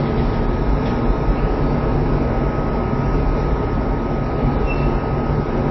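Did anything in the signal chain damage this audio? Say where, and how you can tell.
Yes. Throughout, the sound is watery and swirly, with nothing above 5.8 kHz. That hard treble ceiling and the flickering of weak detail point to the codec stage, likely MP3 compression starved of bits, which fits a rate near 24 kbps.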